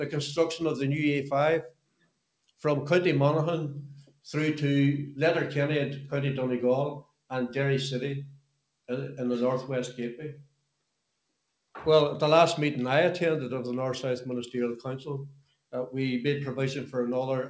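A noise suppressor made for speech was left running on this sound throughout. It treats steady tones and tails as noise, so the level keeps swinging by roughly 5 dB, and the audio pumps and thins while sharp attacks still come through.

At 1.64 to 2.22 s, 4.05 to 4.26 s, 7.02 to 7.31 s, 8.26 to 8.64 s, 10.34 to 10.82 s and 15.29 to 15.73 s, the noise suppressor cut the sound far harder. Held or fading parts sink by about 22 dB (about 13 dB at 4.05 s), briefly dropping away, and decays end abruptly. Nothing remains above 8 kHz, which fits a wideband G.722 call codec.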